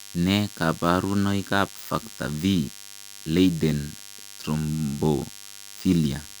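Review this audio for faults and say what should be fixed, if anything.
A DECT cordless phone buzz runs under the speech for the whole clip: a thin, steady 100 Hz buzz rich in harmonics, sitting roughly 15 dB below the speech. A nearby DECT handset or base bursts every 10 ms, and the audio circuitry rectifies those bursts into sound. Keep DECT equipment well away from the microphone, cables and preamp.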